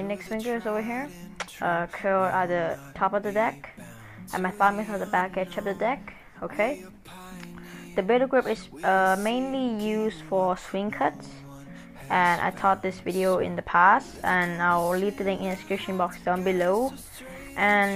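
Nothing wrong is audible anywhere in the clip.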